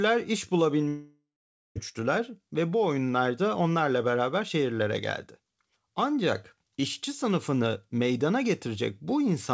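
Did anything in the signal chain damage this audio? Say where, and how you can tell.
Yes, network stage: from 0.88 to 1.77 s the sound smears into a fading buzz, then 0.5 s of silence. That's likely a long network dropout.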